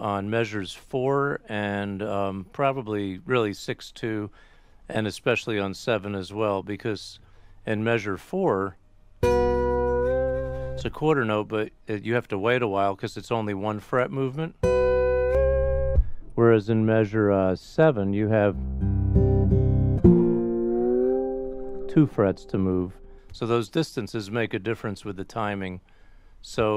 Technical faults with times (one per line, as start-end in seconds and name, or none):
15.35-23.18 de-emphasis applied wrongly